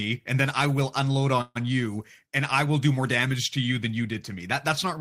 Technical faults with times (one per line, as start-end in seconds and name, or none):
1.41-1.67 call audio freeze